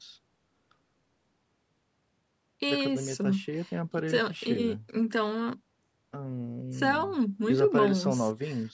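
Speech clip, no technical faults.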